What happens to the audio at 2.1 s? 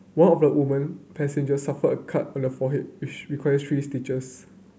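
Nothing goes wrong at 2.1 s; the speech carries straight through that moment with no dropout, click, distortion or other fault.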